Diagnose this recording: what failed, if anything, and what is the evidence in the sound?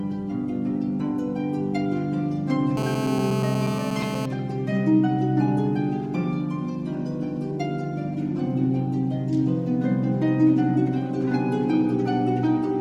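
The analogue side picked up GSM phone buzz from 2.77 to 4.26 s. There's a hard, raspy buzz at about 217 Hz, packed with harmonics and having nothing to do with the audio. It sits about 7 dB below the signal and stays steady, so the phone was on a call. Its bursts were being rectified somewhere in the input wiring or preamp and turned into that audible pulse train.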